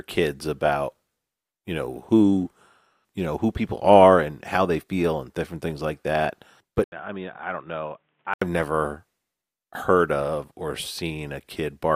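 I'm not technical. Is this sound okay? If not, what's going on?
No. From 6.84 to 8.42 s the speech briefly goes silent, then turns quieter, muffled and boxy. The input likely switched to a poorer device, such as a headset microphone.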